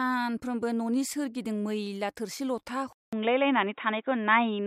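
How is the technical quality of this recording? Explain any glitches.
The recording has one clear fault. At 2.93 s the input likely switched to a poorer device, a different microphone or a headset's call mode, and it stays there to the end at 4.66 s. The new path cuts everything above 3.8 kHz, so the speech turns dull and boxy. A silence of about 200 ms marks the switch, the level shifts by a few decibels, and a faint new noise floor appears roughly 50 dB down.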